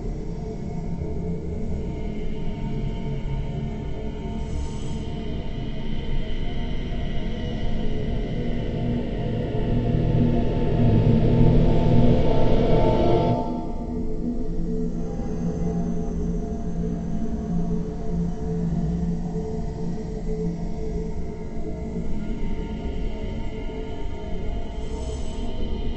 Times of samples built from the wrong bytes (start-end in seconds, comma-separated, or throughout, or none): none